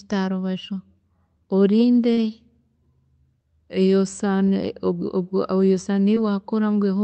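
At 2.13 to 2.19 s and again at 6.15 to 6.18 s, short concealed packet loss leaves a brief smeared wobble where about 40 ms, then 20 ms, of audio arrived late and the decoder extrapolated the previous sound. On a spectrogram, harmonics flatten and blur briefly.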